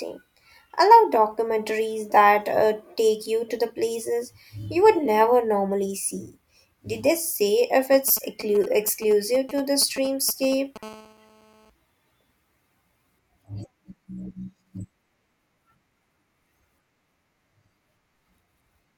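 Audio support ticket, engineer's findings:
Galloping dit-dit-dit ticks and short 217 Hz buzz fragments, 7.93–10.78 s, roughly 15 dB under speech. GSM signalling bursts from a nearby 2G phone, rectified in the audio path.

Hard, raspy 217 Hz buzz, rich in harmonics, 10.83–11.70 s, about 24 dB below speech. GSM phone buzz: a nearby 2G phone on a call, with its steady burst train demodulated by the circuitry.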